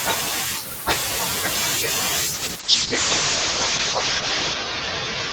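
Speech with a call bitrate drop from 2.35 s to the end. The encoder starved of bits as the call's bandwidth estimate fell. High frequencies above 8 kHz vanish, down from a full 20 kHz range, so the sound turns muffled. Coarser coding adds a rough, watery texture. The harshest stretch lasts about 2.2 s. The change in quality points to a fall from roughly 32 kbps to 8 kbps.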